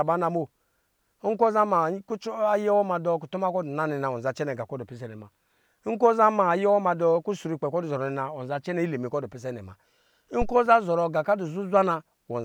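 A deep, short thump in the speech at 10.42 to 10.57 s, peaking around -16 dBFS and dying away within 35 ms, is a phantom power thump: a supply switched on or off on a live input.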